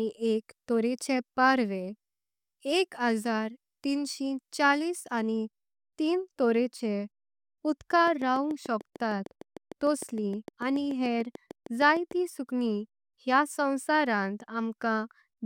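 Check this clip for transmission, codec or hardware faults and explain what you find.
One hardware-type fault is present: a train of clicks from 8.07 s to 12.12 s. Sharp, near-identical pulses arrive at a regular 6.7 per second, around thirty in all, and they tick through the speech and the gaps between phrases at roughly the level of the voice. The likely cause is interference from nearby equipment or an interface coupling pulses into the signal. Unlike random crackle or dropouts, the clicks share one shape and a steady rhythm.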